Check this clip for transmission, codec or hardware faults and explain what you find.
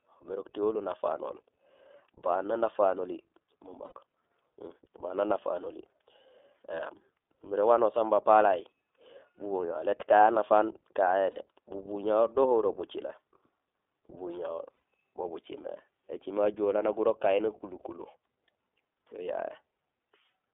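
Two faults are audible: the whole recording has passed through the iLBC codec, and three short iLBC frame losses interrupt the speech.

iLBC codec, throughout the 20 s. The codec encodes each frame's excitation independently, and the damage is plainly audible. The band is confined to roughly 300 Hz to 3.5 kHz, the speech sounds slightly rough and synthetic, and the character fits the 15.2 kbps mode with 20 ms frames.

Lost iLBC frames at 3.86–3.93 s, 11.32–11.40 s and 14.76–14.82 s. Packets went missing (about 60 ms, 40 ms and 60 ms of audio), so the decoder filled each gap by repeating the last pitch cycle mixed with noise. Each gap sounds like a brief held, buzzy vowel, and normal speech resumes immediately afterwards.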